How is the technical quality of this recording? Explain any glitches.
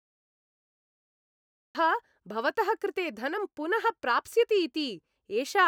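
The recording has one clear glitch, a cut-off start. From 0 to 1.75 s there is pure digital silence, and then the speech begins abruptly mid-sound with no natural attack, because capture began late. The waveform shows a flat line that jumps straight into the speech signal at 1.75 s, and the spectrogram shows a hard vertical edge there.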